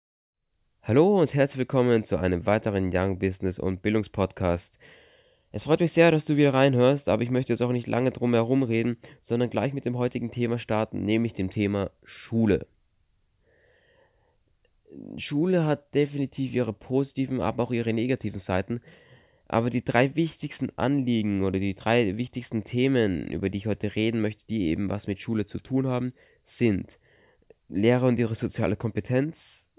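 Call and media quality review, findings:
No audible faults found in this speech recording.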